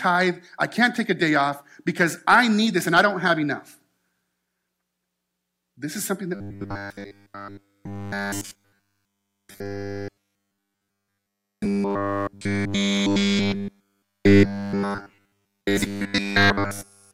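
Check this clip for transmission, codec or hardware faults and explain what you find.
One fault is present: robotic sound from repeated short buffers, running from 6.35 s, just after "is something", to 17.13 s. Through that span the speech becomes a rigid, metallic buzz at a fixed 100 Hz that only roughly tracks the syllables. The likely cause is audio arriving too slowly, so playback loops the last chunk instead of advancing. Essentially all of the section is repeated material, and the 100 Hz rate fits a 10 ms buffer.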